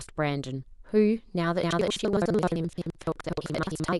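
From 1.62 s to the end of the clip, the program filling the output ring buffer and the hardware draining it have drifted into each other, producing buffer tearing. In every period, roughly half the buffer still holds speech from about a third of a second earlier, spliced in with abrupt joins at each edge. The result is a steady robotic rattle at 11.7 Hz, which fits a 2048-sample buffer, present only while speech is sounding.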